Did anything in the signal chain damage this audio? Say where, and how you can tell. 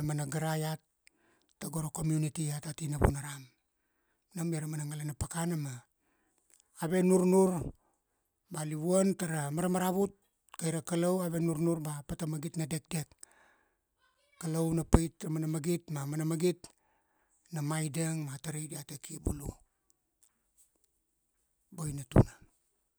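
Yes. There is a block of digital silence at 14.14 s in this speech. It sits at the driver or buffer stage. The sound drops straight to silence for about 5.8 ms and then returns. Neither edge has a fade, so each one makes a sharp step. The gap is so short that it is heard as a tick or dip, not as a hole. Its length fits a 256-sample buffer that was not filled in time, so zeros were played in its place.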